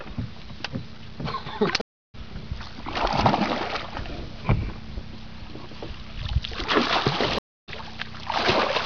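A broken connection forced the player to reconnect and restart its decoder mid-stream, a stream reconnect, at 1.81 to 2.16 s and again at 7.39 to 7.69 s. Each leaves about 0.3 s of silence, then the audio resumes slightly further on, skipping roughly 0.3 s and 0.2 s of material respectively.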